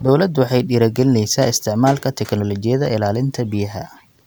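No technical faults are audible anywhere in the speech recording.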